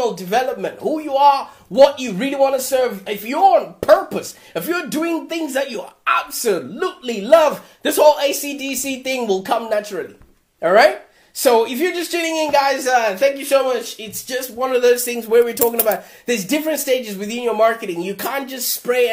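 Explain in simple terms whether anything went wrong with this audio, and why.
Nothing went wrong here.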